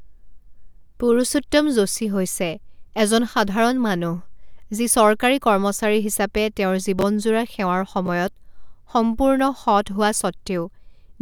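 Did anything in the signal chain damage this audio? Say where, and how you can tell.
Yes, chunks out of order at the driver or buffer stage: just after "চৰকাৰী কৰ্মচাৰী হিচাপে তেওঁৰ", 6.99–7.02 s jumbles briefly, then 8.06–8.08 s again. Roughly 12 ms blocks play late, not missing. Unlike a dropout, nothing vanishes; the order scrambles across three hard joins.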